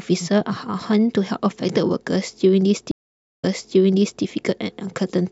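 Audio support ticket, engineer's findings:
Stream reconnect, 2.91 to 4.23 s. Speech cuts to silence for 0.5 s, then resumes 0.81 s earlier, repeating speech. Player lost its connection, reconnected and restarted the decoder mid-stream. Server resent a burst of already-played audio.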